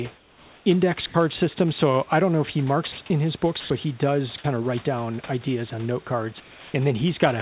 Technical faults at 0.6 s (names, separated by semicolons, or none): comfort noise in place of the background